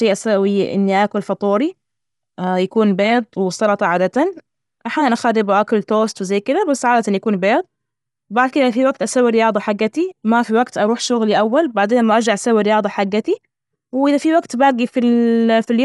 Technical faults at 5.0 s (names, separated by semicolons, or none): Dolby Digital compression